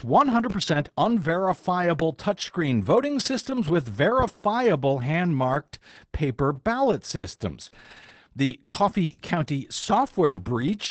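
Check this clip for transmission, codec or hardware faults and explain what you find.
Yes, there are faults: a pop near the start, a packet-loss burst with error-correction repairs around 7 s, and a stretch of repeated loss from about 8.4 s. The call codec limits the audio to about 8 kHz.

Loud pop, 0.50 to 0.54 s, just before "unverifiable touchscreen voting systems". A sudden electrical step was most likely added to the signal by a plug, switch, static discharge or driver glitch, and the circuitry after it shaped it into a short pulse. The result is a single sharp pop, about 5 dB above the speech, lasting roughly 40 ms, while the speech continues underneath.

Burst of packet loss, 7.15 to 7.38 s, right after "hand marked paper ballot". Several consecutive packets failed to arrive in time, and the receiver covered the hole by stretching the last sound for about 80 ms while fading it. Then 60 ms of speech is simply gone, so the voice jumps ahead. 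A small playout delay shift of about 20 ms accompanies it.

Lost packet rebuilt from error correction, 7.23 to 7.29 s and 7.67 to 7.73 s. In each case a lost packet was replaced by the low-bitrate backup copy carried in the following packet, so there is no gap. Instead, each 60 ms patch sounds rougher and noisier than the surrounding speech, a brief grainy smear rather than a dropout, with the first one falling inside the burst above.

Repeated packet loss (robotic sound), 8.45 to 10.43 s. Packets went missing four times in this two-second stretch, the longest gap being 120 ms. Each hole was patched by extending the previous sound, with around 360 ms filled this way and about 18 percent of the span concealed, and roughly 300 ms rebuilt overall. Another 360 ms is lost outright. Because the holes come close together, the speech turns choppy, with pieces dropping out.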